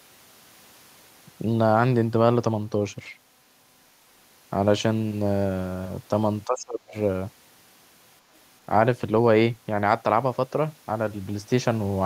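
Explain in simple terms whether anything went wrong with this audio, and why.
Between 6.45 and 6.95 s, for about half a second, the speech suddenly sinks to a much quieter level and then comes back. This is speech suppressed in double talk. The likely cause is that both people spoke at once, and the echo canceller, unable to separate this talker from the returning echo, turned everything down. Unlike a network dropout, the sound fades deeply rather than vanishing in a clean gap.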